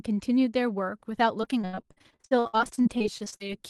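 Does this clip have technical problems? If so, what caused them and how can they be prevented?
Yes. From 1.41 to 3.59 s the speech has repeated packet loss (robotic sound): many short dropouts, the longest 76 ms, each filled by extending the previous sound. About a third of that stretch is concealment, so it sounds choppy with pieces missing. A steadier, less congested network path and a deeper jitter buffer would prevent it.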